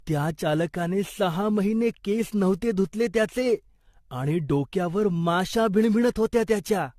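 Generation loss runs throughout the speech: a swirly, hollow smear with blurred consonant attacks and nothing above 14 kHz. It likely comes from around seven successive lossy encodes, each re-quantising on a shifted frame grid, in a chain that points to AAC-LC at about 64 kbit/s.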